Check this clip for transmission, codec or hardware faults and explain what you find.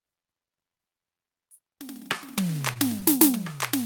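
Two brief hitches in the music, both short stalls from a late packet. At 2.73 s and again at 3.00 s the sound is held for a moment, with a faint buzzy smear. A packet arrived late, the jitter buffer ran dry, and the receiver stretched the last audio for about 24 ms and 20 ms before resuming. Nothing is lost, but playback drifts slightly later each time.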